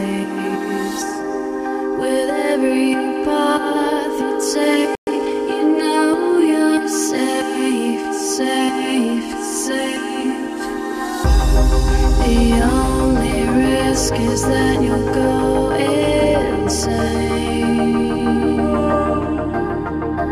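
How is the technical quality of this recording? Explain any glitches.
The recording has two linked glitches close together, a brief dropout followed by a short hurried stretch.

From 4.95 to 5.07 s there is a playback stall: the sound cuts out mid-flow for 120 ms, then resumes. The likely cause is the player running out of buffered data, or its thread being blocked, so nothing reached the output until it recovered. On a waveform this shows as a flat, near-silent line; on a spectrogram, a clean vertical gap across all frequencies.

From 5.07 to 5.31 s comes time-compressed catch-up. The player trims its accumulated backlog by cutting out small slices and cross-fading the joins, playing about 1.5 times faster at unchanged pitch. It sounds rushed. A spectrogram shows the features squeezed closer together in time while their frequencies stay put, and the waveform's envelope looks compacted, with small seams where slices were joined.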